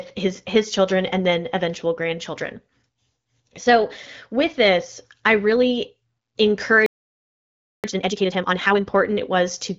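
At 6.86 s the speech halts mid-flow and the output stays silent until 7.84 s, a playback stall of about 0.98 s, likely the player running dry or its thread being blocked.

From 7.84 to 8.80 s comes time-compressed catch-up. The speech runs at twice its normal rate as small pieces are cut and cross-faded to clear the backlog. The pitch stays put, which separates it from a simple speed-up that would raise the pitch.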